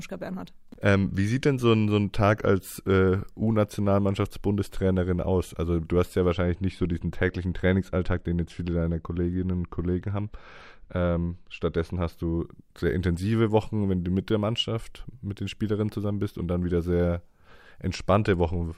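From 6.33 s to 12.13 s, just after "du hast ja", a de-emphasis filter was applied wrongly: a treble cut meant to reverse pre-emphasis was applied to speech that had none, or was applied a second time. The response slopes smoothly downward toward the top end, sitting about 10 dB lower at 10 kHz than at 1 kHz. The speech turns dull and muffled until the full brightness returns at "du sehr intensive".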